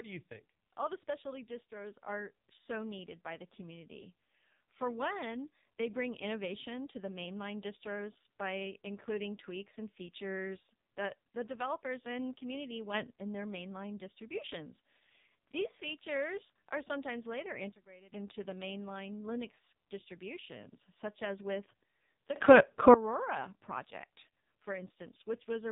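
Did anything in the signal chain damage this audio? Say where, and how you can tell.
Yes. The codec stage did the most damage: this is AMR narrowband mobile codec (AMR-NB) coding at a low bitrate of 5.9 kbps, and the damage is heavy. The speech sounds buzzy and synthetic because the vocal-tract model and sparse pulse excitation are starved of bits. On a spectrogram there is a hard ceiling at 3.8 kHz with nothing above it across the whole clip, and the harmonics below look smeared and coarse.

There are also three sudden gain jumps, each a step change in level with no ramp. The first runs from 12.94 to 13.14 s, between "the developers and community" and "in their mainline distributions," and raises the level by about 6 dB. The second runs from 17.72 to 18.12 s, after "features are sometimes later" and before "into the mainline," and drops it by about 18 dB. The third runs from 22.36 to 22.94 s, after "such as with the," and raises it by about 19 dB. 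On the waveform the envelope and the noise floor step together, which points to digital gain being switched instantly, likely in call processing.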